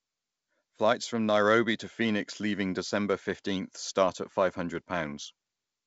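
Speech with no technical faults, carried over a call path whose band stops at 8 kHz, consistent with a wideband codec such as G.722.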